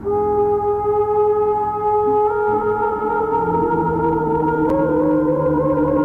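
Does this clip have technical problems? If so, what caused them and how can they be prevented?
Yes. At 4.70 s there is a sharp tick, a block of digital silence about 6 ms long, where the sound cuts out abruptly, which points to an output buffer left unfilled in time. Using larger buffers and keeping heavy work off the audio thread prevents it.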